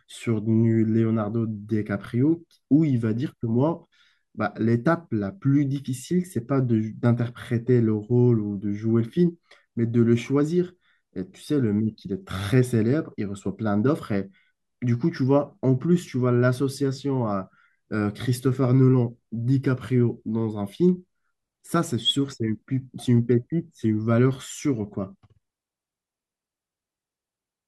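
Nothing in this recording of speech stands out as a technical problem; there's nothing to flag here.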